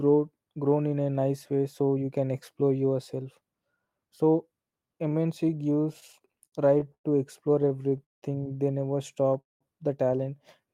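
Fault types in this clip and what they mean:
Repeated stalls (stutter): packets arrived later than playback needed, so the jitter buffer kept running dry and the last sound was stretched to fill each gap. This produces 12 short hitches from 5.93 to 7.06 s and 7 more from 7.62 to 8.24 s, the longest about 0.18 s, with nothing lost.
Call audio freeze: at 9.41 s the sound halts and goes nearly silent for about 0.18 s, then resumes where it stopped at 9.63 s, with 0.2 s inserted and nothing lost. The likely cause is delayed packets emptying the jitter buffer.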